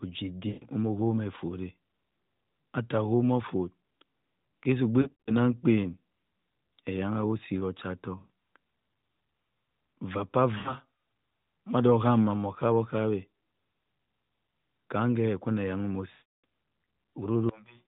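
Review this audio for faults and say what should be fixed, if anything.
Lost AMR speech frames: radio errors failed frame checksums, so the decoder reused its last good pitch and vocal tract settings at falling gain. The speech smears and fades at 0.48–0.64 s, 5.02–5.34 s (scattered brief dropouts), 8.18–8.30 s, 10.58–10.75 s and 16.12–16.44 s, the last sinking toward silence. A stronger radio link or more robust channel coding would prevent these losses.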